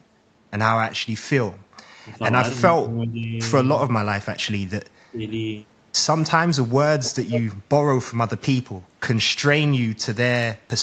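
From 1.59 to 1.76 s the echo canceller gated the background while the loudspeaker was active, pulling the microphone down. The room sound dips by about 7 dB for roughly 150 ms, then returns once the canceller releases. Twice more, at 2.77 to 3.33 s and 5.11 to 5.21 s, the speech drops in level, likely speech suppressed in double talk, where the canceller mistook the near talker for loudspeaker echo. The dips reach around 15 dB over about half a second, then around 10 dB for about 100 ms. The call microphone processing leaves nothing above 8 kHz.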